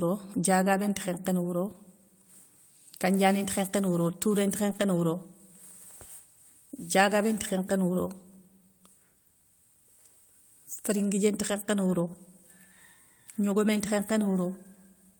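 Speech clip with a lost packet rebuilt from error correction around 4.69–4.83 s: the frames are rougher and noisier, which fits roughly four packets of low-bitrate in-band copies.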